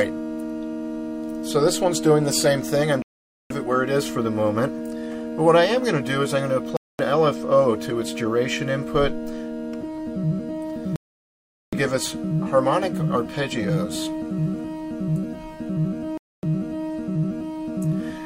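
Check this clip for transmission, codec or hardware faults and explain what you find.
Four digital broadcast dropouts: 3.02–3.51 s, 6.77–7.00 s, 10.96–11.73 s and 16.18–16.44 s. Each time the receiver lost good frames, likely failed checksums, and muted, so the audio drops to silence and returns later, with whatever was sent in between simply gone.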